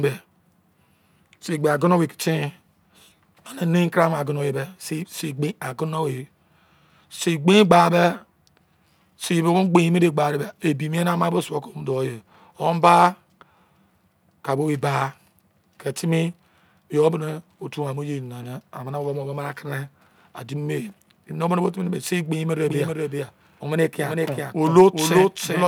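From 22.65 s to the end, a doubled audio track appears: a full-band copy of the speech trails roughly 0.4 s behind and around 5 dB quieter, likely from a slower second capture path. It starts abruptly, with no decay, and the spectrogram repeats every pattern at that offset.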